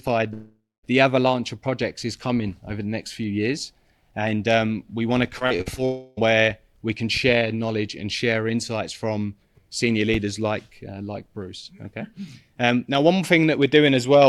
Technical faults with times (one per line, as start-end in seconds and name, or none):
0.33-0.85 long network dropout
5.39-5.79 repeated packet loss (robotic sound)
5.85-6.19 long network dropout